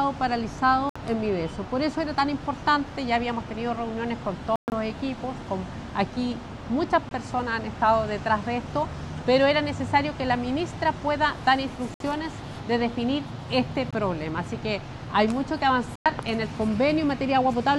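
The sound cuts to silence and picks up further along at 0.89 s, 4.56 s (about 140 ms, choppy), 7.09 s, 11.94 s, 13.91 s and 15.96 s. It's likely a Bluetooth dropout, with packets missing the headphones. The gaps come in 20 ms steps, which suggests whole packets lost.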